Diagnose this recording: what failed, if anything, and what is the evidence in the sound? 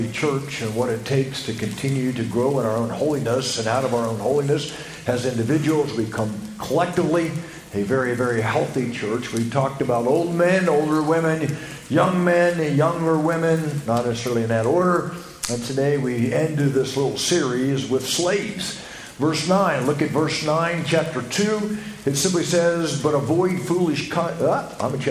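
No stage failed; nothing in the sound points to a fault.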